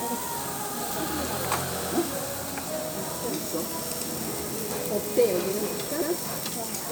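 Around 1.82 s, 3.92 s and 6.02 s there's a little stutter, each lasting about 0.1 s. That's overlapping chunks: the audio went through in 2-second blocks, and each new block starts 100 ms early, so that slice plays twice at every join.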